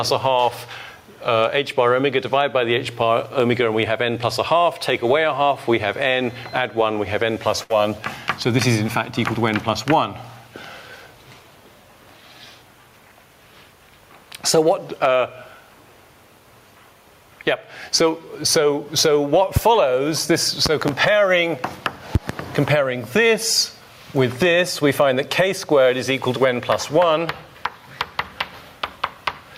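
Throughout, loud and soft parts are squashed closer in level, swinging around 15 dB: gain pumping, likely from excessive gain driving a fast limiter. At 7.63 to 7.72 s, a burst of packet loss holds and fades the last sound for about 60 ms, then resumes roughly 60 ms further on. A loud pop, likely a voltage spike from a plug, switch or static, cracks sharply at 19.56 s, about 20 dB above the signal; paired pops follow between 20.66 and 20.91 s and between 22.15 and 22.33 s.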